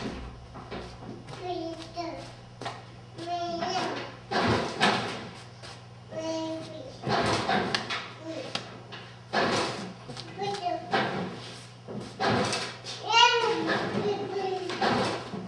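No technical faults can be heard anywhere in the clip. Nothing in the sound points to any problem with how it was recorded, processed or delivered.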